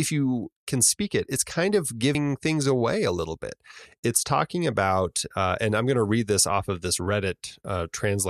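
At 2.12 s the speech breaks into a brief glitch from damaged data in the compressed stream; the decoder loses frame sync, leaving a brief disturbance on the spectrogram.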